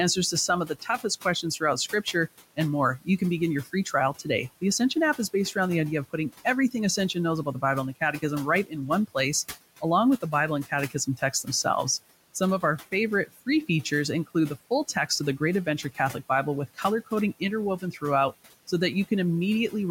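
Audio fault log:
Throughout: noise suppressor artifacts. The suppressor is pulling steady background down by about 15 dB, deciding band by band and frame by frame what counts as noise. The room noise, which sits about 19 dB below the speech, therefore dips away in the gaps and swells back up under each phrase, so the floor seems to breathe.
0.67–1.05 s, 10.9–11.47 s and 13.27–13.47 s: speech cut by the noise suppressor. In each of these spans the suppressor mistook low-level parts of the speech for background and turned them down along with it, by about 11 dB in the first and about 12 dB in the other two. Only short slices are hit, roughly 150 ms within each of the first two spans and about 100 ms in the last, so soft consonants or tails of syllables sound swallowed, faint or briefly clipped away.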